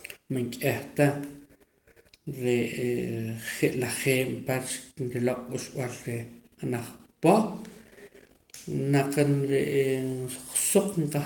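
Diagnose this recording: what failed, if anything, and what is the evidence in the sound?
Nothing failed; the speech shows no audible fault anywhere.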